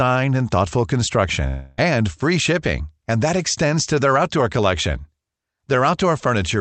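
From 1.47 s to 1.80 s the speech stops and the last sound is stretched into a fading buzz for about 0.3 s, never reaching silence, before the audio resumes with that stretch lost. This is likely a long network dropout, with the receiver's concealment filling the gap over a call path limited to 8 kHz.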